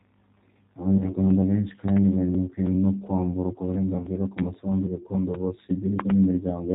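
Throughout the speech, the G.729 codec, here at 8 kbit/s, rebuilds each frame from a vocal tract filter, a pitch predictor and a few pulses, so it sounds plainly rough and synthetic. On a spectrogram nothing appears above 4 kHz, and harmonics look smeared.

From 0.98 to 1.12 s, VoIP packet loss concealed by the speech codec replaces about 20 ms of lost audio, which points to one missing packet. The decoder extends its last pitch and filter into a fading buzzy tone or coloured noise, and the sound stays weak until the frames rebuild. On a spectrogram this shows as stretched sound that dims out.

Between 1.88 and 1.99 s, two loud pops land on top of the speech, peaking about 15 dB above it. The likely cause is an electrical transient such as a switch or driver glitch. The waveform shows two tall spikes, and the spectrogram shows full-height vertical lines.

From 3.98 to 4.09 s, between "no kwamburwa" and "ku masambu gakondo", the same packet-loss concealment covers another 20 ms gap with a decaying buzzy tone or noise.

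At 4.39 to 4.41 s, just before "masambu gakondo", a single sharp pop stands about 20 dB above the speech as one narrow spike.

From 6.00 to 6.12 s, a final pair of pops, again about 20 dB up, appears as twin spikes and broadband streaks.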